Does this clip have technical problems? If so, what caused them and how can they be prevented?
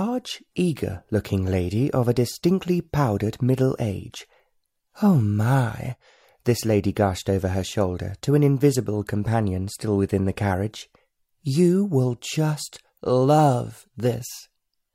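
No technical faults detected.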